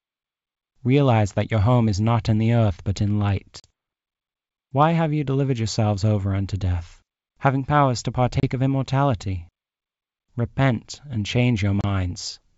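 At 3.60 to 3.71 s (40 ms lost), 8.40 to 8.44 s and 11.81 to 11.85 s (30 ms each), packet loss on an ADPCM call leaves hard silent holes. Unlike a plain dropout, the G.722 speech resumes slightly distorted, because the decoder's predictor and step size briefly disagree with the sender's.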